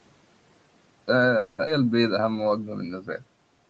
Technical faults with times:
1.37-1.60 call audio freeze
1.66-1.69 skip ahead
1.78-2.92 jitter buffer slow-down

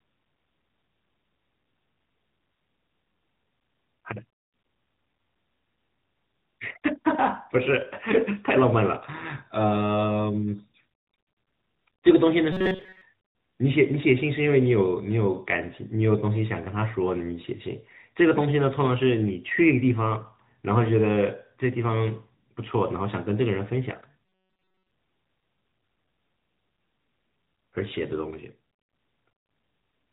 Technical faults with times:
0.00-30.12 AMR narrowband mobile codec
12.52-13.01 robotic sound from repeated short buffers
24.26-24.91 robotic sound from repeated short buffers

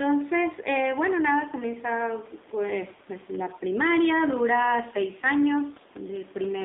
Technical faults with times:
0.00-6.64 AMR narrowband mobile codec
2.96-3.00 lost AMR speech frames

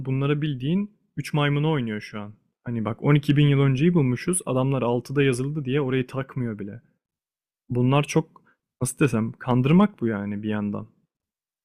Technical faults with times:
3.11-3.43 hard clipping
9.04 hard clipping
9.51-9.84 hard clipping

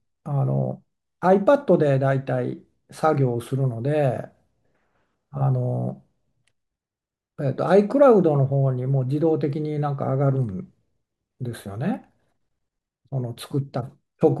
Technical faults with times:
none

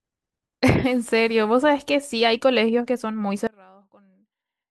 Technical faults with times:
3.47-4.71 one channel inverted

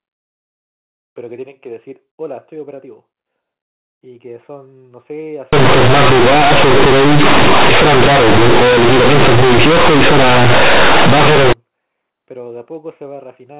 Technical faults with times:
5.53-11.53 companded audio read as linear

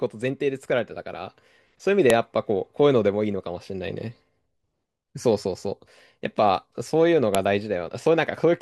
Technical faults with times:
2.10 file header played as audio
7.35 file header played as audio

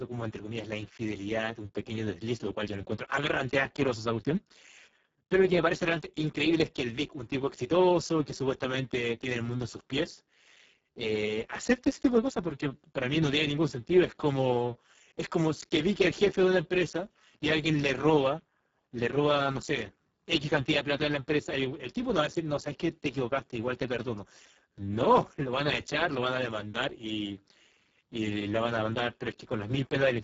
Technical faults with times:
0.00-30.24 Speex codec

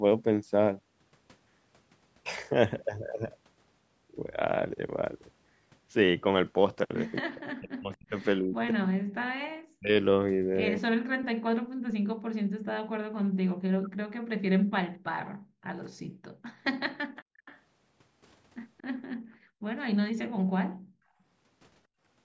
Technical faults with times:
7.20-12.44 speech suppressed in double talk
13.36-13.98 speech suppressed in double talk
15.32-17.45 background gated by the echo canceller
15.85-15.89 echo leak
17.45-17.59 echo leak
18.78-18.83 echo leak
19.32-21.21 background gated by the echo canceller

